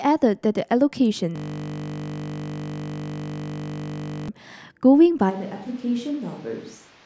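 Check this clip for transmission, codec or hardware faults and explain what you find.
Two clear problems here. From 1.36 to 4.28 s there's a system hang loop: the system froze while the hardware kept replaying one 20 ms buffer, giving a steady 50 Hz buzz.

From 5.31 s to the end, the sound abruptly turns roomy and hollow, drops roughly 10 dB, and picks up more background noise. That's likely a switch to a distant microphone.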